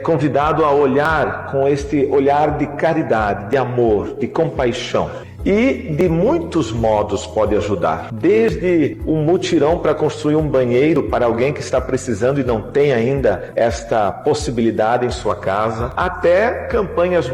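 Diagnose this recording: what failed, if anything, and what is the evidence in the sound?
Audio missing between chunks at 1.05, 3.53, 6.01, 8.49, 10.96 and 15.92 s: brief skips, each about 20 ms, spliced without silence, recurring roughly every 2.5 s. The likely cause is the driver or buffer stage dropping a sliver while handing off between fixed-length chunks.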